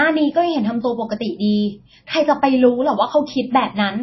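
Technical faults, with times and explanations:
Throughout, MP3 compression: everything above 5.8 kHz is simply gone, and the speech has a plainly audible watery, swirly edge, likely from an encoder starved of bits, which fits a low bitrate around 24 kbps, cutting the treble and switching weak frequency lines on and off.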